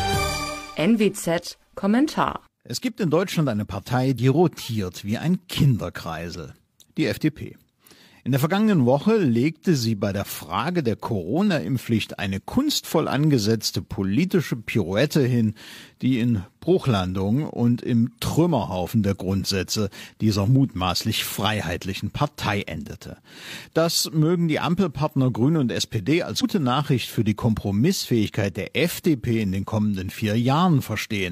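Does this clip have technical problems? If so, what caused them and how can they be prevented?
Yes, there are compressed frames skipped at 4.14–4.18 s, 26.38–26.44 s and 28.15–28.30 s. The sound jumps ahead by roughly 50, 150 and 50 ms. To prevent this, check file integrity after transfer and re-encode from an intact source.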